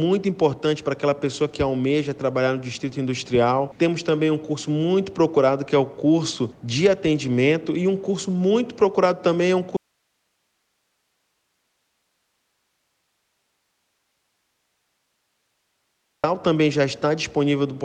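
The signal feed was likely interrupted while the path downstream stayed live, producing an audio dropout to a faint residue from 9.77 to 16.24 s. The sound cuts off abruptly for about 6.5 s, leaving only hiss roughly 50 dB down, then returns.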